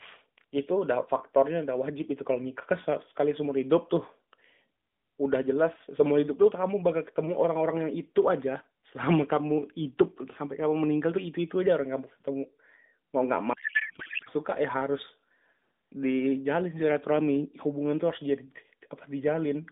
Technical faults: codec payload misread

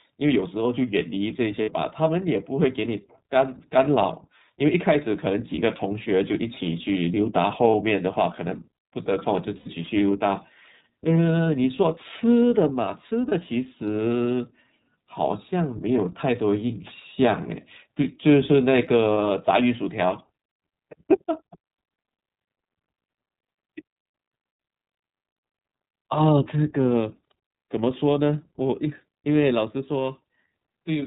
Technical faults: iLBC codec; lost iLBC frames

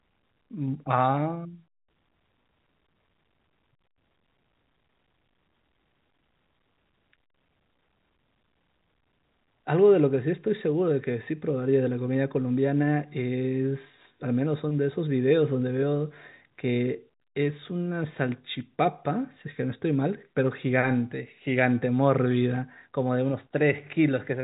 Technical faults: none

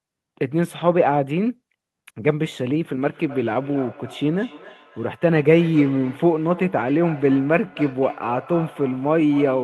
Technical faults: feedback echo between two devices

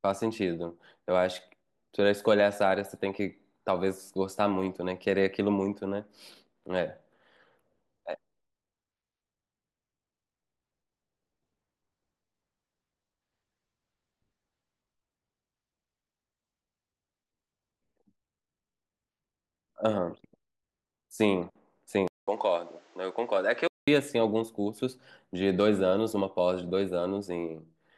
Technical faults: input switched to a poorer device

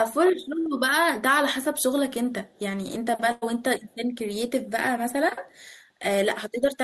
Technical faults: burst of packet loss; echo leak

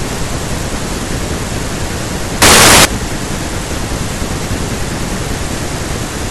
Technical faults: samples built from the wrong bytes

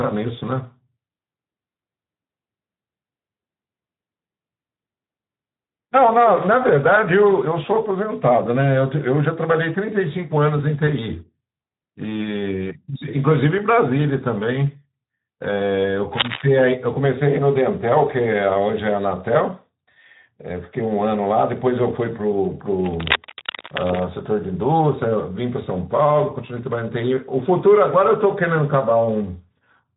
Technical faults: Speex codec; cable scratch noise

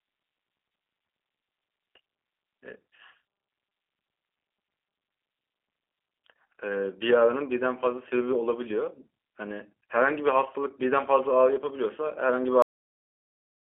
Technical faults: G.729 codec; cut-off end

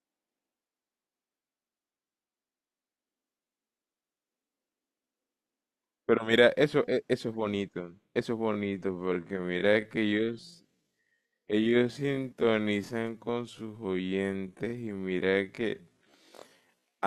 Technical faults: time-stretched section

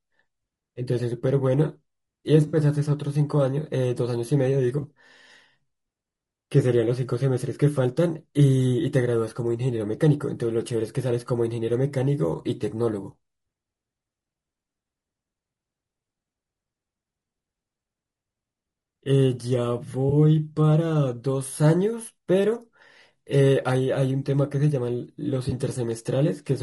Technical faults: low-delay AAC compression; AAC frame loss with concealment

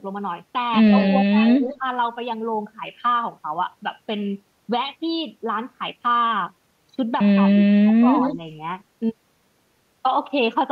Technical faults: echo leak; speech suppressed in double talk

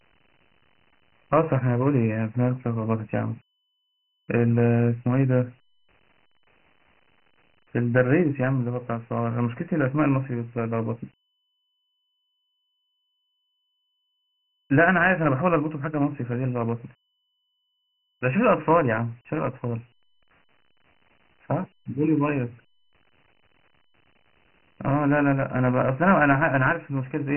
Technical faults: Dialogic VOX ADPCM

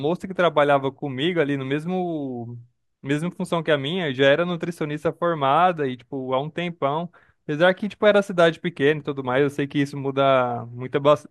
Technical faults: none

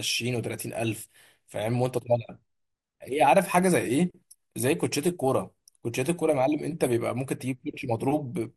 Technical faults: MP2 compression

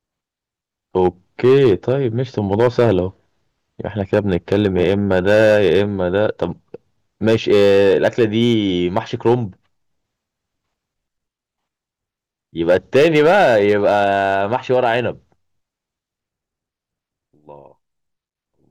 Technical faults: hard clipping

